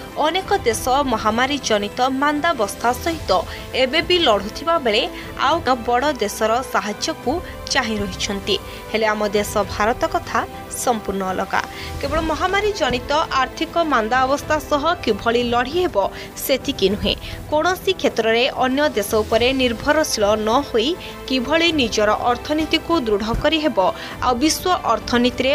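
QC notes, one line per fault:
5.67 s, CD skip: a tick and a very brief mute of a couple of milliseconds, then the sound carries on from a different place. The player's laser was knocked or hit a flaw and jumped to another turn of the disc's spiral, so playback resumes out of sequence.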